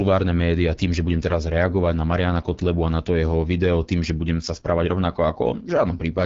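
From start to finish the speech has passed through the AMR wideband (HD Voice) codec at a very low rate, and the plainly audible damage suggests one of its two lowest modes, around 8.85 kbit/s. The codec models the voice as a vocal tract driven by sparse pulses, and at this rate there are too few bits to follow it closely, so the speech comes out rough and raspy. Above 6.4 kHz only shaped noise is filled in, and nothing remains above 7.6 kHz.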